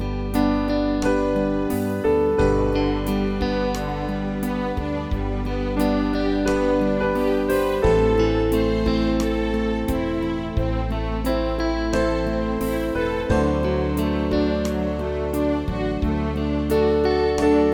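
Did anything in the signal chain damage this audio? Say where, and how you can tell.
No, nothing in the signal chain damaged this audio.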